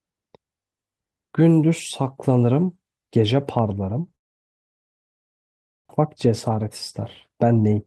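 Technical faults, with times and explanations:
4.15 to 5.91 s, long network dropout: The sound cuts out for about 1.76 s. Only a brief fading tail of the last sound is heard before near-total silence. When the audio returns, about a second of material is simply gone. The cause is likely a long gap in arriving packets. The receiver had nothing to play, so it stretched the last sound and then went quiet, and it resumed further on with roughly 0.7 s more delay.
5.99 to 6.65 s and 7.29 to 7.86 s, jitter buffer speed-up: In both stretches the speech runs faster while keeping its pitch. The first is mild, at 105 percent, with around 40 ms removed. The second is stronger, at 117 percent, with about 100 ms removed, and it sounds noticeably hurried. After the dropout, audio had piled up in the buffer. The receiver trimmed many short pitch-period pieces in a row to bring the delay back down.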